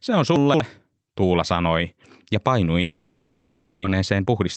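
At 0.36 to 0.6 s, chunks out of order. One 60 ms chunk of speech plays three chunks later than it should. Nothing is missing, but the sequence is jumbled. Hard joins at the displaced edges give a garbled moment.

From 2.81 to 3.86 s, a long network dropout is the likely cause. Right after "sanoi ja", the last sound is stretched into a fading buzz lasting about one second. No true silence appears. When speech returns, about 0.6 s of it is gone.

From 3.94 to 4.41 s, a jitter buffer speed-up follows. Playback catches up on the delay built during the gap. It removes short pitch-period pieces, about 70 ms in total. Speech runs at 113 percent speed with unchanged pitch and sounds hurried.

Throughout, the Opus call path limits the audio to 8 kHz.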